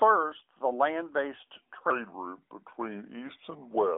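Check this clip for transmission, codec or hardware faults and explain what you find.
One fault: a section at the wrong speed. The band stops near 3.7 kHz, which fits the AMR narrowband mobile codec on the path.

From 1.90 s, right after "the land based", to the end, the audio runs at 0.797 times its recorded speed, likely from playback against a mismatched clock. Pitch drops about four semitones and the speech drags. On a spectrogram, harmonics and formants slide lower and stretch out in time. The waveform's cycles visibly lengthen.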